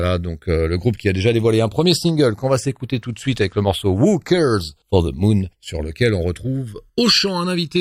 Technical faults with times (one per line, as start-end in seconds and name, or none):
0.00-7.81 channels drifting apart